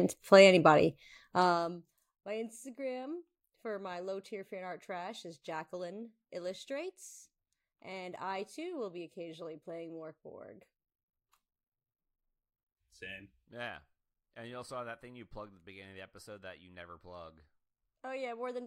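From 1.14 to 2.01 s, zipper noise rides on the speech as the level falls by about 20 dB. The gain moves in discrete unsmoothed steps, around a hundred per second, and each step leaves a small click, giving a fine ticking buzz throughout the fade.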